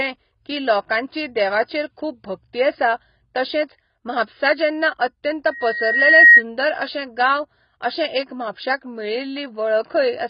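Throughout, the speech is dull and smeared, with nothing above 5.2 kHz and a warbling texture, likely heavy AAC compression at a very low bitrate such as 16 kbps. The warble separates it from a plain low-pass filter.

From 5.51 to 6.43 s, just after "तशेंच महापसा जेन्ना अत्यंत", a loudspeaker feedback squeal appears at 1.9 kHz. It swells over under a second to about 15 dB above the speech, a growth that a steady interfering tone would not show.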